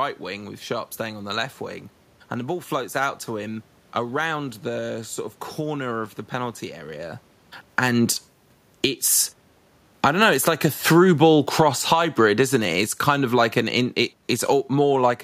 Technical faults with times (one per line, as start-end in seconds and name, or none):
7.63-15.19 automatic gain falling